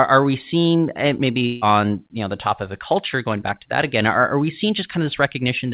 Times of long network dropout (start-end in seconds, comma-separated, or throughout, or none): 1.46-1.63